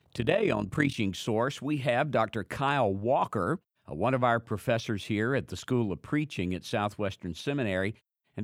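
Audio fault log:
0.00–0.96 s overlap-add ripple: mismatched frame overlap makes level dip about 11 dB around 40 times a second, a fast flutter, not a smooth tremolo.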